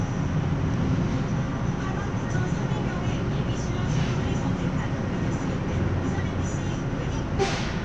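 Nothing is technically wrong with this recording of sounds.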